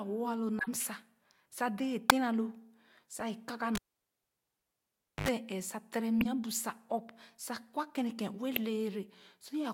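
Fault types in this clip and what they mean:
Corrupt frame decoded: At 0.59 to 0.68 s, 2.10 s just after "sa dee a", 3.19 to 3.22 s and 8.56 s, a few damaged compressed frames were decoded anyway. Misread data puts energy at wrong frequencies, heard as short chirpy blips, loudest near 2.10 s.
Cable pulled and plugged in: From 3.75 to 5.28 s a live connection is broken and remade. A pop opens about 1.48 s of near silence, then a 79 ms burst of 50 Hz mains buzz as the plug's tip makes contact, and a second pop brings the sound back.
Compressed frames skipped: At 6.21 to 6.26 s, right after "sa tere", frames the decoder never played are dropped, so the audio jumps ahead by only a few milliseconds.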